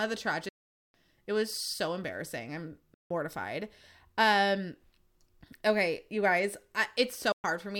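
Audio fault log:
0.49–0.95 s, 2.94–3.11 s, 7.32–7.44 s: Bluetooth dropout, likely. The speech cuts to silence for 0.45 s, 0.16 s and 0.12 s, then resumes further along, as if it had kept playing underneath.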